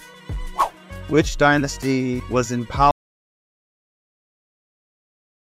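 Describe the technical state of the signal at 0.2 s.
At 0.2 s the signal is intact, with no audible fault at that point.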